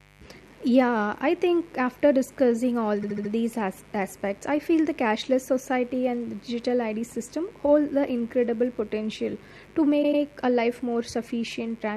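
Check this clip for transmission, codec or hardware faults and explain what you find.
Two faults are present: a continuous buzz and two stutters.

Throughout the speech, a steady raspy buzz sits well below the level of the voice. This is mains buzz at 50 Hz, with switching spikes on the supply adding harmonics into the kilohertz range.

From 3.01 to 3.30 s, a 72 ms fragment plays four extra times, which fits a run of three frames. From 10.02 to 10.21 s, a 96 ms fragment plays twice more, consistent with four frames. Each is heard as a stutter. These are repeated frames: compressed data sent or written again, which lengthens the audio by 288 ms and 192 ms.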